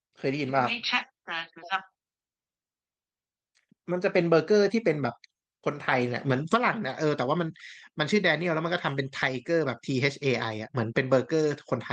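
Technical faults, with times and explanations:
No technical faults can be heard in this speech clip. It has come through a working WebRTC call path, with the top of the spectrum ending near 12 kHz and the light coding texture that points to Opus at a moderate bitrate of around 32 kbps.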